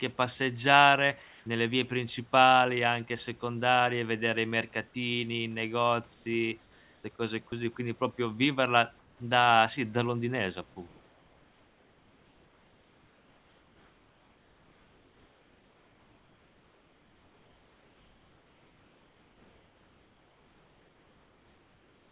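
Comfort noise in place of the background appears at 1.22 to 1.46 s, 6.14 to 6.26 s, 6.62 to 7.04 s, 8.99 to 9.20 s, and from 10.88 s to the end. In each pause, where the background sits about 31 to 38 dB below the loudest speech, the real background gives way to a steady, featureless hiss about 1 to 3 dB quieter. This is likely discontinuous transmission: the sender stops sending during the pause, and the receiver synthesises noise roughly matched to the background's level and shape.

Sound dropped by the voice detector occurs at 7.49 to 7.52 s. About 20 ms of speech is lost and replaced by the same flat synthetic noise, so the speech briefly thins out before returning. The likely cause is the sender's voice detector treating part of the speech as background and stopping transmission too early. Comfort noise fills the gap until the detector triggers again. Throughout, the G.711 call path passes nothing above 4 kHz.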